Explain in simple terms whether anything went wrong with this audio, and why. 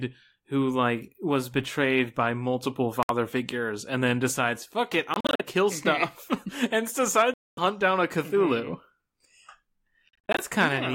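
The speech cuts out four times, most likely a Bluetooth dropout: sound packets reached the headphones too late and were thrown away. There is a short hole at 3.03 s, broken stutters between 5.14 and 5.42 s, a longer gap from 7.34 to 7.59 s, and more stutters from 10.09 to 10.41 s. Unlike a pause or a freeze, the speech doesn't wait. It comes back further on, as if it had kept playing through the silence.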